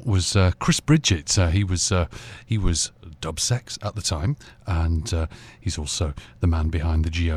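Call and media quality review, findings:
No faults found in the speech signal: level, continuity and timing hold steady throughout, with nothing in the audio path that calls for a ticket.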